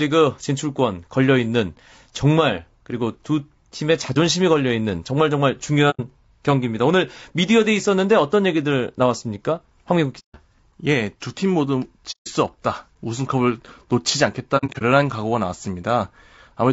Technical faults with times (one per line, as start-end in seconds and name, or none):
0.00-16.73 low-delay AAC compression
4.13-4.17 AAC frame loss with muting
5.90-6.00 AAC frame loss with muting
10.19-10.36 AAC frame loss with muting
12.11-12.28 AAC frame loss with muting
14.57-14.82 AAC frame loss with muting